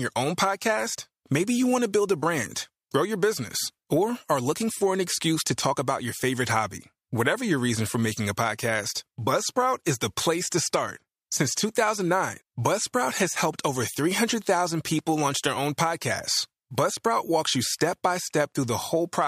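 No technical faults can be heard anywhere in this speech recording. There is nothing to mark at any point in time or trace back to a cause.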